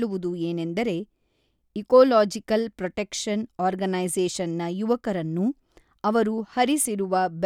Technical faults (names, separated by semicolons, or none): none